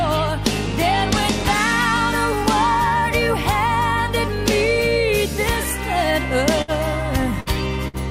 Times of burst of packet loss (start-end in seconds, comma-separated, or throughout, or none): 6.62-6.71, 7.40-7.49, 7.88-7.96